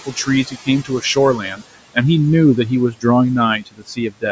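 From 3.61 to 4.23 s, speech cut by the noise suppressor: it misread speech as noise and pulled parts down by about 18 dB, leaving them faint and swallowed.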